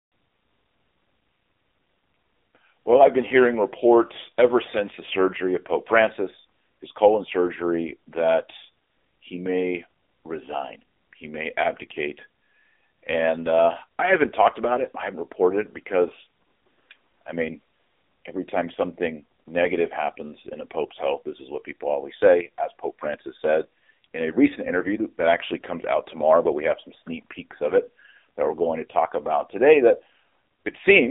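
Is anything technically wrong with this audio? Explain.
Yes. Throughout, the speech carries AMR narrowband mobile codec damage: nothing above 3.7 kHz survives, and the heavily buzzy, synthetic vocal-tract modelling fits a low mode near 6.7 kbps.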